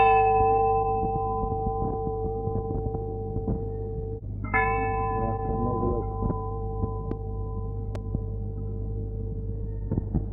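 At 7.11 s a loud pop lasting about 24 ms cuts through, peaking around 10 dB above the surrounding sound. A weaker one follows at 7.95 s, roughly 5 dB over it. Each is a brief voltage spike, likely from a switch or static, while the audio continues underneath.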